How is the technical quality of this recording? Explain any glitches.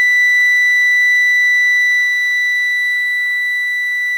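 No technical glitches can be heard in this music recording. The audio continues without any interruption or disturbance to point to.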